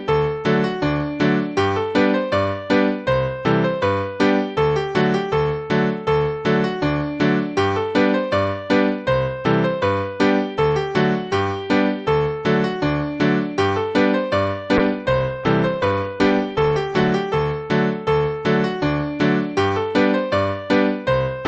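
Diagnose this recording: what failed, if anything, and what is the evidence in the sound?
A call bitrate drop hits the codec stage from 14.78 to 17.21 s: the sound turns coarse and watery, and the spectrogram shows content above 12 kHz vanishing, down from 20 kHz, for about 2.4 s. This fits the encoder falling from 64 to 22 kbps.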